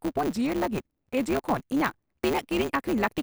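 Throughout the speech there is a steady 150 Hz buzz from a block size mismatch with truncation. Each block loses its tail before the next stage reads it, which fits 512-sample blocks being written, so delivery runs 1.6 times fast at near-normal pitch.

From 0.26 to 1.61 s the speech drops about 94 cents, close to a semitone, and slows by 5.3%, then snaps back. This is likely a drift correction step, where clock-matching software abruptly shifted the playback rate to rebalance its buffer.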